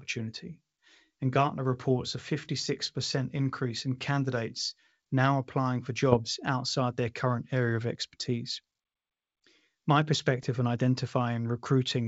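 Two short bursts of bit errors on an ADPCM link break into the speech, at 6.12 to 6.18 s and at 10.43 to 10.50 s. Each flipped bit knocks the decoder's step size and predictor off track, so the damage rings on for some milliseconds. Both events sound like pops and rough, gritty bursts with brief jumps in level. The error rate is a small fraction of a percent. Around them, the G.722 wideband coding stays clear up to 7 kHz, running in the full 64 kbit/s mode.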